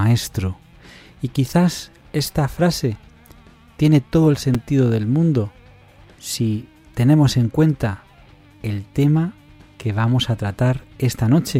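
At about 4.55 s there's a repeated buffer: the device didn't get fresh audio in time, so it just played its last chunk a second time. The repeated slice is tiny, which fits a buffer of about 5 ms, so instead of an obvious stutter you get a quick click where the two copies butt up against each other with a hard join. Only a few milliseconds of sound are lost.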